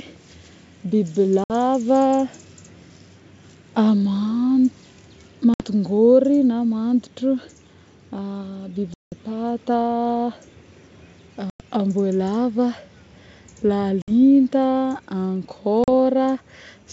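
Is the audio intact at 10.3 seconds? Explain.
Yes, at 10.3 seconds the speech is intact, carried cleanly through G.722 wideband telephone coding at 64 kbit/s with at most a faint trace of the codec.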